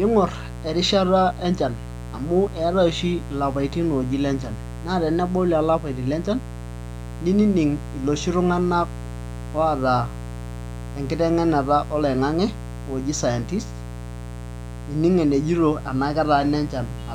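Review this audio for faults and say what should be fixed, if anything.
A mains buzz runs under the speech throughout. It is built on 60 Hz, with raspy harmonics up to several kilohertz. It sits roughly 10 dB below the speech. Switching spikes from a dimmer, rectifier or unshielded cable are getting in. Use shielded cables away from dimmers.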